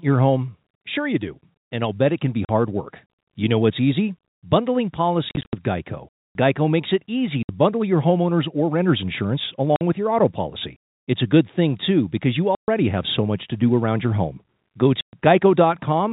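Packets were dropped and the receiver played silence in their place (packet loss filled with silence), cutting the speech with hard-edged gaps at 2.45–2.49, 5.29–5.53 (scattered, longest 70 ms), 7.43–7.49, 9.76–9.81, 12.55–12.68 and 15.01–15.13 s. The gap lengths fit 10 ms packets over the telephone-band G.711 path.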